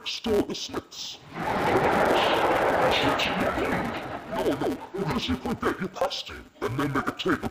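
From start to finish the audio is heard as interleaved audio read as planar: alternating left-right samples are split into halves per block. The blocks here are short, about 5.8 ms, which fits a 256-sample block, so instead of an octave drop there is a dull, robotic buzz at 172 Hz.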